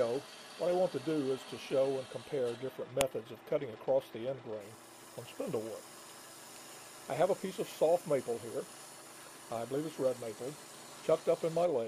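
At 3.01 s there is a sharp, loud click. This is a file header played as audio: leftover header bytes from a joined piece reproduced as samples.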